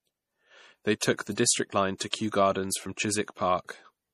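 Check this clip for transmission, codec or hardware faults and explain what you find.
Two codec faults are audible: lossy compression throughout the speech, and three brief pre-echoes.

Throughout, the sound has a watery, swirling quality and plainly audible codec damage, with nothing above 15.2 kHz. This is likely MP3 compression at a low bitrate, around 40 kbps. Starved of bits, the encoder cuts the treble and drops weak frequency lines that flicker between frames. The hard ceiling and swirl distinguish it from simple low-pass filtering.

Pre-echo occurs at 0.99 to 1.02 s (28 ms), 1.98 to 2.00 s (24 ms) and 2.11 to 2.13 s (24 ms). Each sharp onset falls late in a transform block, so quantisation noise sized for the loud part spreads backward. A short hiss leads each attack, which sounds softened. Unlike a true echo, it comes before the sound, not after.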